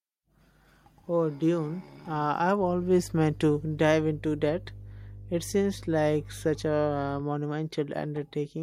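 A ground loop or nearby transformer has coupled the 50 Hz power line into the signal path of this speech recording. From 2.58 s to 7.24 s, mains hum sits under the speech as a steady low tone with a few low harmonics, roughly 15 dB below it.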